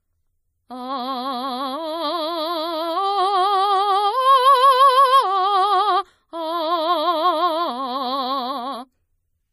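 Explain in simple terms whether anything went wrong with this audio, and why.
MP3 compression, heard from start to finish: the music sounds plainly watery, with a clear swirling quality and nothing at all above about 15.1 kHz, so the top sparkle is missing. The likely cause is an MP3 encoder with too little data to work with. To save space it cut off the highest treble and dropped quieter details, which flicker in and out and leave that unsteady, washed-out sound.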